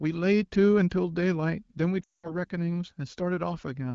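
From 2.03 to 2.32 s come lost AMR speech frames, a run that fits about ten 20 ms frames. The wideband decoder repeats the last good pitch and vocal tract settings at falling gain, so sound drops to near silence within two frames. Spectrograms show frozen harmonics dimming to a gap.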